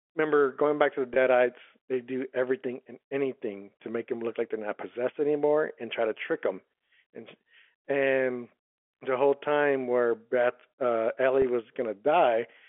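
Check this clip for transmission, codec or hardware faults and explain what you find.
Two brief dropouts are present, both from packet loss with pitch repetition. At 1.14 to 1.16 s and again at 11.42 to 11.44 s, about 20 ms of speech goes missing, which fits a single lost packet each time. The receiver fills each gap by replaying the last pitch cycle, so the speech briefly sounds held and slightly buzzy. The G.711 telephone band, limited to roughly 300 Hz to 3.4 kHz, runs through both events.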